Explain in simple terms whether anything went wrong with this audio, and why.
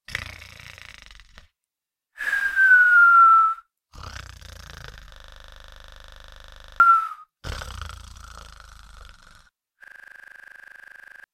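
Something did go wrong, twice. From 5.16 to 6.8 s and again from 9.84 to 11.24 s there's a system hang loop: the computer stalled, but the sound hardware kept replaying the same 40 ms scrap of audio, 25 times a second, so you hear a rough buzz. That points to a buffer of about that length. Each time, roughly a second and a half of the real audio is simply gone.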